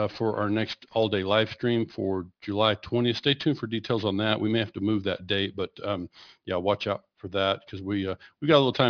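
Speech, with aliasing throughout: sibilants turn gritty and metallic, and the spectrum runs hard up to about 5.5 kHz. This points to a downsample to around 11 kHz without an anti-alias filter, with folded energy roughly 25 dB below the speech.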